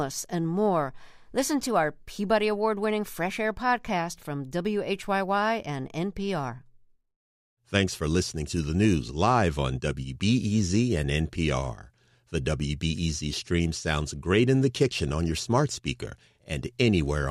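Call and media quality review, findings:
No faults found in review.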